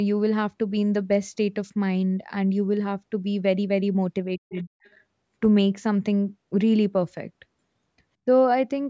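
Around 4.37 to 4.68 s the talker's speech sinks in a way that sounds like speech suppressed in double talk. Within that stretch about a hundred and fifty milliseconds are pulled down, the deepest dip falling somewhere near 25 dB, so the speech briefly thins and nearly drops out. The likely cause is the echo canceller facing both sides talking at once and, unable to tell the local talker from loudspeaker echo, ducking everything together.

Inside that same dip, at 4.59 to 4.64 s, there's a short scrap of the other side's voice leaking through, very faint, roughly 35 dB under the speech. Another brief scrap follows at 4.85 to 4.9 s, quieter still at around 40 dB down. Both are tiny fragments rather than sustained phrases, which suggests the far end playing on the talker's loudspeaker and the canceller likely missing a small residue of it on the microphone.

Suppression shows up once more at 8.25 to 8.29 s. 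It's a much gentler dip of roughly 10 dB, lasting about forty milliseconds, and reads as a quick flicker in level rather than a dropout, again consistent with double-talk handling. Across the clip the audio stays band-limited to 8 kHz, which is the normal effect of call microphone processing.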